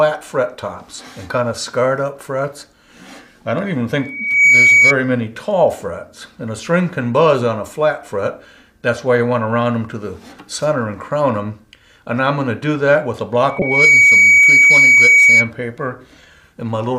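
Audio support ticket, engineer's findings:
Rising 2.3 kHz tone swelling over roughly half a second to well above the programme level, 3.98–4.95 s and 13.48–15.51 s. Loudspeaker feedback squeal: mic picking up its own speaker, loop gain above unity at 2.3 kHz.

Sharp chirp burst peaking around -5 dBFS, 13.59–13.62 s, inside the second squeal. Corrupt frame decoded: bit errors across a couple of codec frames, misread data played as spurious energy.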